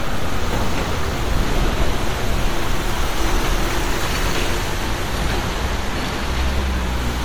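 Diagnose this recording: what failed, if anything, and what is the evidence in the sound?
Codec stage, generation loss. Throughout the clip the sound is swirly and hollow, with smeared, blurred attacks and more grain than a single pass at this quality would leave, though content still reaches up to 20 kHz. The likely cause is repeated MP3 encoding, about seven passes at a rate consistent with 96 kbit/s. Each decode and re-encode quantises again on a shifted frame grid, so the noise and spectral holes build up.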